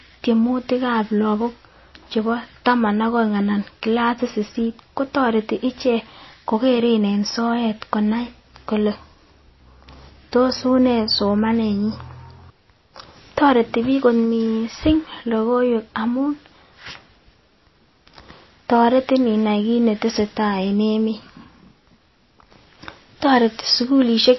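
Right through, the speech sounds watery and swirly with nothing above 5.8 kHz, likely MP3 compression starved of bits, which fits a low bitrate around 24 kbps.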